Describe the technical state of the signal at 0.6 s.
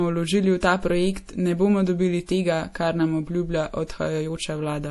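Pre-echo at 0.60 to 0.63 s: the codec spreads quantisation noise across its block, so a short hiss smears about 22 ms ahead of the attack. Throughout, the sound has a watery, swirly quality with nothing above 11.5 kHz, plainly audible damage that points to MP3 compression, likely at a low bitrate around 48 kbps.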